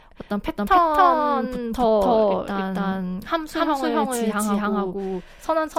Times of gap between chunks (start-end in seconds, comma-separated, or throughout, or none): none